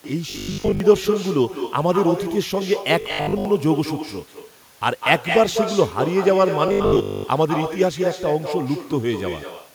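From the start, the speech is shadowed about a fifth of a second later by a thinner copy about 7 dB quieter. This is echo with no canceller: the far end's microphone picks up its loudspeaker and sends the sound back. At 0.30 to 0.80 s, 3.01 to 3.45 s and 6.68 to 7.24 s, the speech turns into a rigid, metallic 50 Hz buzz. This robotic sound from repeated short buffers likely comes from a 20 ms stretch being replayed while much of the real audio is skipped.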